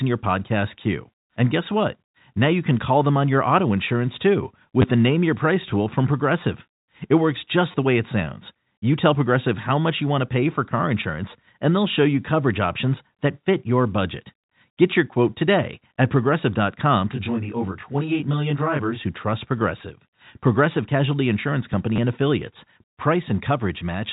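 At 4.82 to 4.84 s, just after "your auto insurance too", and again at 7.72 to 7.74 s, just before "the way it sounds", there is packet loss with the last packet repeated. About 20 ms of audio went missing each time, and the receiver filled the gap by replaying the previous packet. Because the replay doesn't line up with the pitch period, the sound stutters briefly. On a waveform, a short segment repeats exactly, with a step at its edges. A spectrogram shows a thin vertical smear.

From 17.12 to 19.01 s, ending just before "who trust", channel delay causes comb filtering. One channel runs roughly 20 ms late, and summing to mono cancels shared content at evenly spaced frequencies, starting near 20 Hz. The sound turns rough and slightly doubled. A spectrogram shows fixed, closely spaced horizontal notch stripes.

At 21.96 to 21.98 s the packet loss with repeat recurs, producing the same brief robotic stutter.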